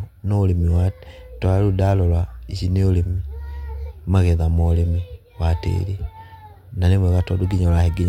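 No technical faults can be heard anywhere in the recording.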